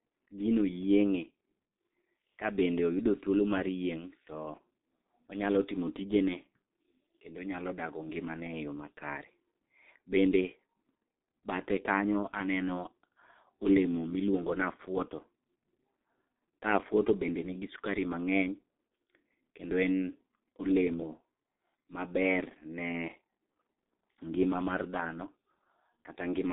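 G.723.1 codec damage runs throughout this speech clip: nothing above 3.8 kHz survives, and the slow, heavily compressed model leaves muffled, hoarse sound, which fits roughly 6.3 kbit/s.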